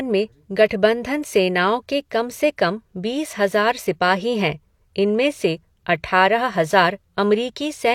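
At 0.68 to 0.71 s there's pre-echo: the codec smears its quantisation noise across the block, so a short hiss leaks in about 22 ms before the attack, blunting it.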